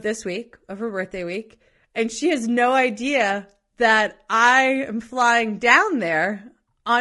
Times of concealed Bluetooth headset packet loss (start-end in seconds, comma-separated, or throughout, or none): none